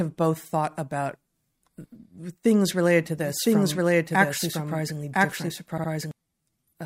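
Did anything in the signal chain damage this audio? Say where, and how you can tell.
Yes. From 3.01 s to 6.11 s a doubled audio track runs under the speech: a full-band copy at roughly the same level trails about a second behind, with no decay or room colour, and it starts and stops abruptly. That points to the playback or recording stage, most likely a second, slower capture path or an edit holding two copies out of step.

At the codec or storage stage, repeated frames at 5.78 to 5.90 s produce a short stutter. A 64 ms block plays again twice, adding 128 ms. This is the decoder replaying compressed frames that were written or sent more than once.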